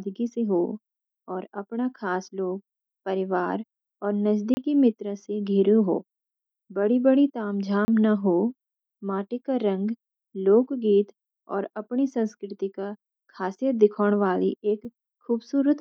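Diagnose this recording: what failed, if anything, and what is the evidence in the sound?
Buffer underrun leaving blocks of digital silence: 30 ms holes at 4.54 and 7.85 s, a tick at 14.85 s, each zero-filled.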